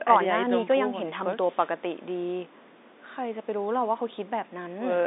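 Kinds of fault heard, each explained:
Nothing stood out on listening; the speech comes through the telephone line's narrow band with nothing above about 3.8 kHz.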